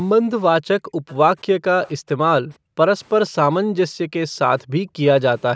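The room sound behind the speech drops away abruptly, by about 40 dB at its deepest, at 0.2–0.31 s and 0.83–1.07 s, then again at 2.57–2.77, 3.62–4.0, 4.27–4.39 and 4.62–5.01 s. This is background gated by the echo canceller: while the loudspeaker played, the canceller pulled the microphone down hard. At 1.08–1.15 s and 1.87–1.91 s a faint, brief scrap of speech, roughly 30 dB below the main speech, arrives 477 ms late. The likely cause is an echo leak, where the canceller missed part of the loudspeaker sound and sent it back.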